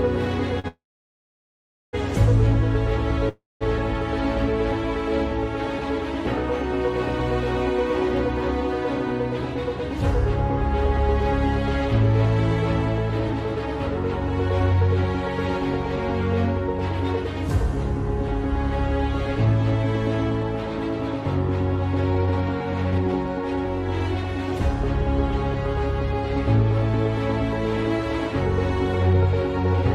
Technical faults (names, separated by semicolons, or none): short stall from a late packet; call audio freeze; jitter buffer speed-up